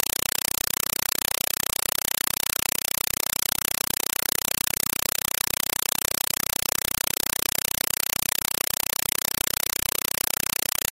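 Throughout, a compressed stream played as audio: undecoded AC-3 data becomes chattering static, with 4 ms full-band noise bursts 31.25 times a second between zero stretches.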